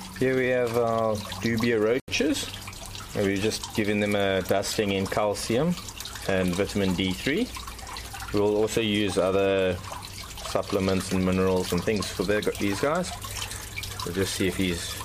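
At about 2.00 s the sound cuts to silence for roughly 81 ms, then comes back at 2.08 s. That's most likely a Bluetooth stall: interference delayed packets, the receiver's buffer emptied, and playback waited for the resent data before picking up again.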